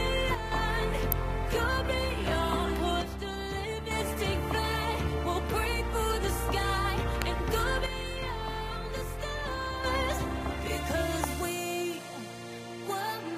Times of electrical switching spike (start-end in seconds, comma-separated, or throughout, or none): 1.12, 7.22, 11.24